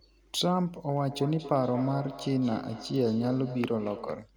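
From 0.88 s to 4.3 s, the speech comes back as a hollow repeat about a fifth of a second behind, at its loudest about 12 dB below the talker. This is feedback echo between two devices: a second device nearby replays the call, and the microphone picks it up again beyond its echo canceller's reach.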